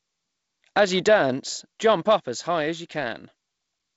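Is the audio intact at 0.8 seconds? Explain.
Yes, the audio at 0.8 seconds is intact, with the speech passing through the G.722 wideband telephone coding as expected and nothing interrupting or distorting it at that point.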